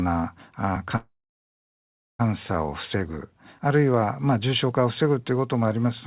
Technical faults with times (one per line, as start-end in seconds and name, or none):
0.96-2.22 call audio freeze